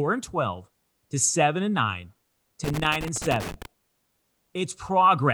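At 2.64 s the speech breaks into loose connector crackle lasting until 3.66 s, about one second. A worn or dirty contact is making and breaking as it shifts, chopping the signal on and off and adding pops from any DC present, heard as irregular scratchy crackle.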